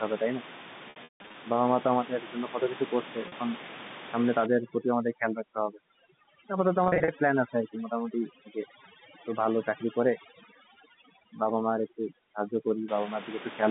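From 0.90 to 1.34 s, packet loss with pitch repetition breaks up the speech. About 280 ms goes missing across 440 ms, with the longest gap lasting 160 ms. The receiver repeats the last pitch period to fill each hole. Short gaps hold a buzzy tone, and the longest fades into silence. At 3.28 to 3.32 s, a 40 ms loss leaves a brief buzzy hold.

From 4.46 to 12.88 s, overdone noise removal attacks the room noise, which sits about 13 dB under the speech. Bands near the noise estimate are pushed far down or shut off. Quiet parts of the voice go with them. The background drops and breaks up into twinkling specks.

Inside that stretch, from 6.84 to 7.08 s, packet loss returns. About 140 ms drops out across 240 ms, in runs of up to 40 ms. Each run is bridged by the same repeated pitch period, giving a string of short buzzy stutters.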